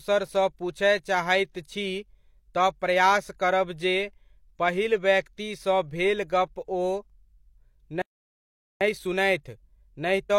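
A speech recording in which the sound cuts out abruptly at 8.02 s and stays silent for about 0.79 s until 8.81 s, a playback stall, likely caused by the player running out of buffered data or its audio thread being blocked until output could resume. From 8.81 s to the end, the speech runs hurried at about 1.1 times normal speed with its pitch unchanged. This is time-compressed catch-up, where the player trims its accumulated backlog by dropping short slices and cross-fading the joins.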